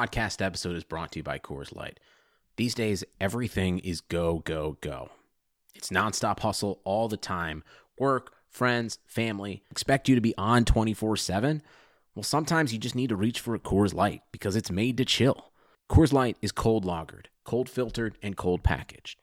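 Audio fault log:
7.08–7.14 s, wireless microphone noise hit: right after "nonstop hustle all" the speech is briefly hit by a quick swish of static lasting about 50 ms. The radio link from an analogue FM microphone faded as reflected signals cancelled, so the receiver's own hiss rose over the audio. That hissy, broadband texture sets it apart from a digital dropout, where the sound would simply cut to silence or stutter rather than fill with noise.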